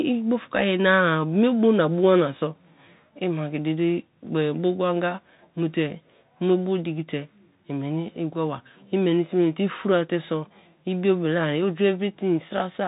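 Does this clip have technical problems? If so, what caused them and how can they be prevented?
Yes. A Bluetooth CVSD headset codec affects the speech throughout. This one-bit delta coder, consistent with a 64 kbit/s link, has an adaptive step that lags loud high sounds, making s sounds scratchy. Spectrograms show nothing above 4 kHz over grainy hiss. Use a wideband headset mode or a wired microphone.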